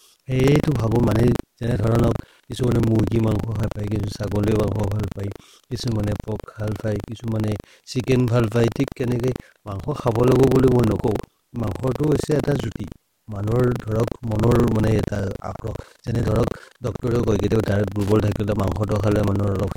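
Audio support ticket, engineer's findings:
Robotic buzz riding on the speech for the whole clip, pitched at 25 Hz, present only while signal is present. Buffer tearing: writer and hardware read pointer crossing inside each period, which fits a roughly 40 ms buffer. About a tenth of each buffer replays audio from about 70 ms earlier, hard joins either side.

Short irregular scratchy crackle, 18.01 to 18.11 s. Loose connector crackle: worn or dirty contact in the cable or jack path making and breaking as it shifts, chopping the signal into rapid dropouts and clicks. Reseat or replace the connector.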